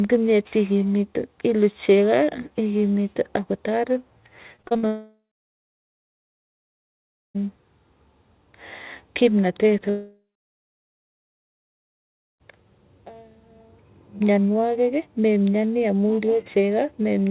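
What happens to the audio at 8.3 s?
Nothing goes wrong at 8.3 s: the speech passes through intact, with only the narrowband sound of the call codec, which leaves nothing above 4 kHz.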